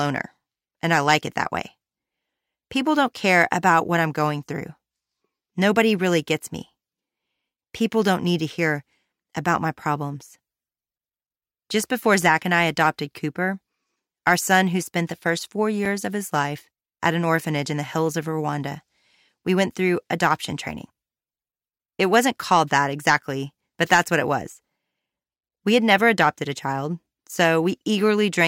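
At 6.44 s the speech drops out for a block of digital silence about 2.7 ms long, and it happens twice more: at 12.22 s just before "and I adopted", and at 15.85 s between "spent the first four" and "of his life at". The output buffer likely wasn't filled in time and went out as zeros. With no fade in or out, each gap comes across as a sharp tick rather than a hole, and the length fits a 128-sample buffer.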